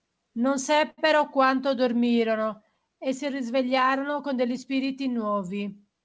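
From 0.90 to 1.00 s the speech holds one sound too long, with a faint buzz or dip, then continues with nothing lost. This is a short stall from a late packet: the jitter buffer ran empty, so the receiver stretched the last sound by 77 ms until the packet arrived.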